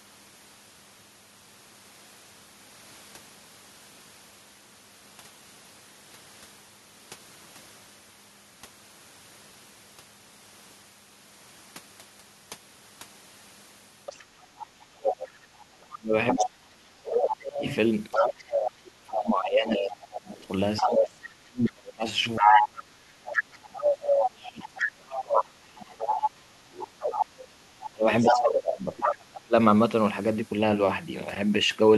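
Speech in which a second voice breaks in at 14.06 to 16.48 s, 17.59 to 18.72 s, 19.81 to 20.98 s, 22.19 to 26.88 s and 28.2 to 28.99 s, at first a little below the main talker and later about as loud. It is most likely the other side's voice leaking through, left behind when echo cancellation failed to strip the loudspeaker's output from the microphone. From 14.56 to 29.55 s the main talker keeps dipping, by as much as roughly 30 dB and for around ten seconds in all, while that other voice is present. This is likely speech suppressed in double talk: with both sides talking at once, the canceller couldn't tell the talker from the echo and turned both down.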